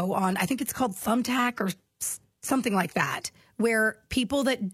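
From the very start to about 3.25 s you're hearing an adaptive stream starting at a low bitrate. The player grabbed a cheap rendition to get going fast, so the speech has that thin, swirly top end that sounds like a low-rate HE-AAC stream around 20 kbit/s. Once it had sized up the connection it jumped to a better one, likely AAC-LC near 96 kbit/s, with no gap, and nothing is left above about 14.9 kHz.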